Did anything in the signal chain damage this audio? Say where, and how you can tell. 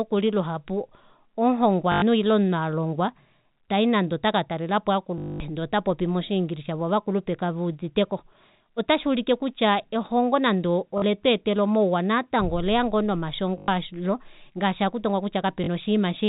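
Yes, in the network: robotic stutters at 1.92–2.02, 5.18–5.40, 10.98–11.02, 13.58–13.68 and 15.64–15.68 s are packet loss with the last packet repeated, buzzing near 50 Hz, which fits 20 ms packets.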